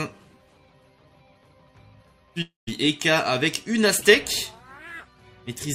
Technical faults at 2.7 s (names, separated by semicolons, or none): long network dropout